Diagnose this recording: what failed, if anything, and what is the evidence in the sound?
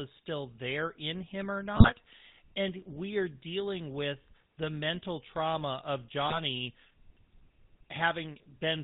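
Codec stage: the GSM full-rate codec runs throughout. The sound stops at 4 kHz and carries a plainly audible buzzy roughness, consistent with 13 kbps full rate.

Radio link stage: GSM bit errors hit at 1.76 to 1.92 s and 6.27 to 6.39 s. Corrupted filter, pitch or gain values distort the speech frame by frame.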